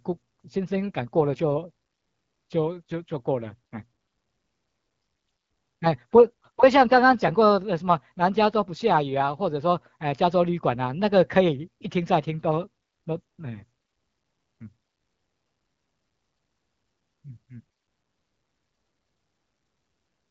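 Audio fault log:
No faults logged; the speech carries through an AMR wideband (HD Voice) path, with the band topping out near 7 kHz and only light codec texture that fits a rate around 12.65 kbit/s.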